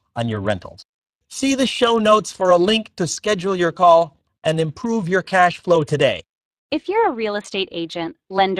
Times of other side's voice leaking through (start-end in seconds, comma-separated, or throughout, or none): none